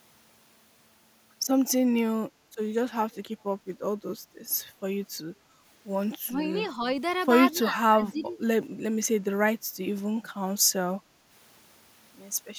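Between 6.24 and 6.87 s the speech sags in pieces, dipping by about 10 dB and thinning for a few tenths of a second in total. This is speech suppressed in double talk, likely because both ends were talking at once and the echo canceller, unable to separate the near talker from the loudspeaker signal, pulled everything down together.

At 7.54 to 7.58 s a brief, faint scrap of the voice returns 249 ms late, very far below the speech, around 35 dB down. This is an echo leak, most likely from a loudspeaker on one end whose echo canceller let a fragment of what its microphone heard slip back into the call.

From 7.58 to 8.39 s the speech is again suppressed in double talk, ducking by roughly 10 dB and losing presence over most of that stretch. Inside it, at 8.25 to 8.29 s, a second short echo leak comes back with the same 249 ms delay, louder this time at around 25 dB below the speech. The repeated delay points to the same uncancelled loudspeaker path.

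Between 11.03 and 11.24 s the room tone drops by about 6 dB for roughly a fifth of a second and then recovers. That is background gated by the echo canceller: while the loudspeaker was active, the canceller clamped down on the microphone, taking the ambient sound with it until it released.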